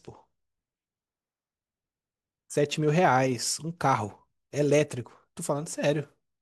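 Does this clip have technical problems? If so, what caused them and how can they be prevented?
No, there are no technical problems to address here.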